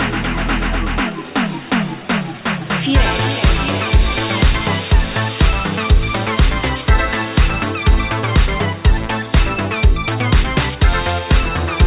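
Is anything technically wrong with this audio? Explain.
No, nothing is technically wrong.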